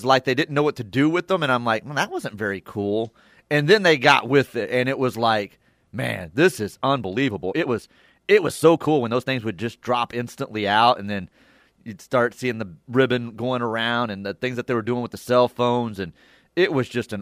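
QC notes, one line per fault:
6.88–9.34 s: time-stretched section. Between "like man this is" and "would just drop instantly" the pace jumps to 1.36 times normal while pitch stays level, sounding rushed. This is likely software shortening the passage by dropping short pieces to preserve pitch.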